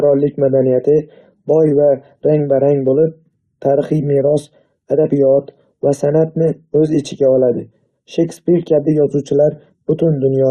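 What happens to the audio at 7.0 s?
Nothing goes wrong at 7.0 s; the speech there carries through intact, with no dropout, click or distortion.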